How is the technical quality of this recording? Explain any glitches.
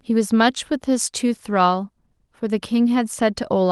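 No glitches or faults detected.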